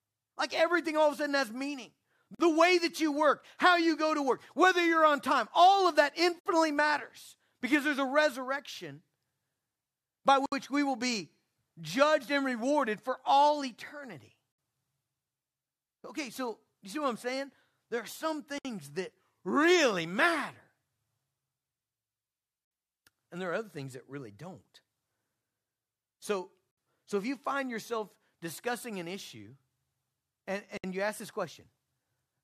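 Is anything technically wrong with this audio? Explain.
Yes. There are gaps at joins of encoded pieces at 2.35, 6.39, 10.46, 14.52, 18.58, 26.71 and 30.77 s, every 4 s. Each piece keeps its encoder start delay and last-frame padding. The sound stops for 47 ms after "a sudden has meaning", then for 63.5 ms at the later joins. The edges are smeared, and the sound resumes where it left off.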